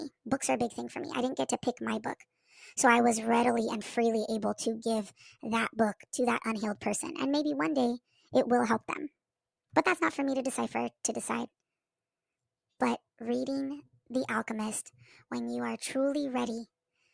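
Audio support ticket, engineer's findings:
Wrong sample rate, whole clip: speech 1.38x fast, pitch up 5.55 semitones together, unlike a pitch shift. Fits 16 kHz audio played at 22 kHz without resampling.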